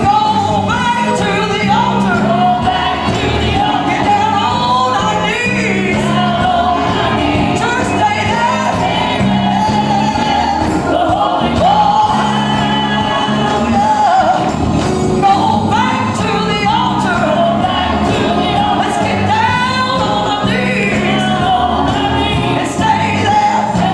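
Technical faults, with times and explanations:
No technical faults can be heard anywhere in this clip.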